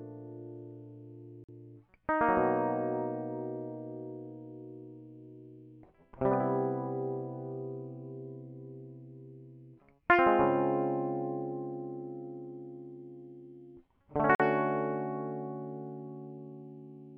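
At 1.44 s and 14.35 s the music drops into a block of digital silence lasting about 46 ms, which fits an unfilled 2048-sample buffer. Each drop is a short hole, seen as a near-flat line on the waveform and a blank vertical stripe on the spectrogram.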